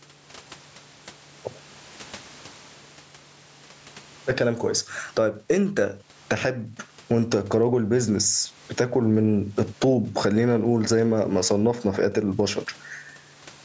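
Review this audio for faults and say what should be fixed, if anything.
Gain pumping runs throughout the clip, with the level swinging by around 20 dB. The likely cause is input gain set far too high, so a fast limiter or compressor clamps down on every peak and releases in the pauses. This flattens loud and soft passages toward one level and leaves the speech sounding squashed. Prevent it by lowering the microphone gain so peaks stay below the limiter's threshold.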